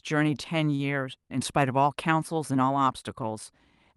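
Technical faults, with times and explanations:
0.75–0.81 s, short stall from a late packet: a packet arrived late, emptying the jitter buffer, so the receiver stretched the last sound for 36 ms, then resumed where it left off. Nothing is lost, but the speech is held slightly too long with a slight buzz or dip.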